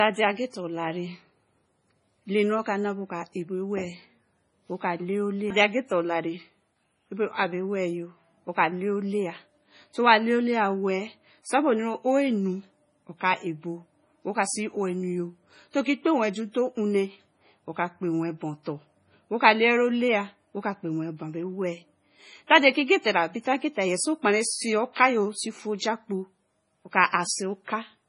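Throughout the speech the sound is watery and swirly, with a metallic chirp on s sounds and smeared consonant onsets, and nothing at all above 10.5 kHz. This is likely MP3 compression under heavy strain, with damage severe enough to point to a very low bitrate, around 24 kbps. Starved of bits, the encoder cuts the top band off at a fixed frequency and discards weaker spectral lines, which then flicker on and off from frame to frame.

At 9.93 s a brief hiss, spread over about 16 ms, runs just ahead of a sharp onset, and a longer one of 32 ms appears from 24.93 to 24.96 s, each leaving the attack that follows soft and blurred. This is pre-echo. The codec spreads its quantisation noise across a whole block. When a loud attack sits late in that block, noise sized for the loud part also fills the quiet moment before it.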